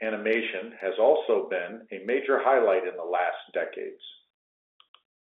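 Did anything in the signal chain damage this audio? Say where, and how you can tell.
No, nothing in the chain has damaged this speech; it's simply a telephone line running G.711 coding, which is why it sits in the narrow band of roughly 300 Hz to 3.6 kHz.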